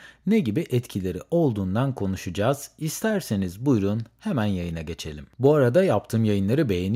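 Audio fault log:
Nothing to log here: the speech comes across without a single fault worth noting.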